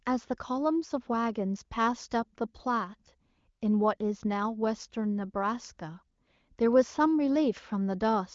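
Nothing stood out as a fault on listening; the speech comes across with the band-limited top end of high-rate wideband phone coding, with no content above about 7.4 kHz.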